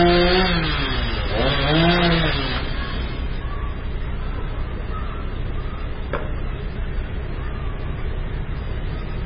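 An everyday sound recording, carrying heavy MP3 compression damage from start to finish. Nothing survives above about 5.5 kHz, so the top end is cut off flat, and the remaining detail has a watery, swirling quality as weak frequency components drop in and out between frames. Transients sound smeared rather than crisp. This degree of band-limiting and instability is most likely the result of a very low MP3 bitrate, around 16 kbps.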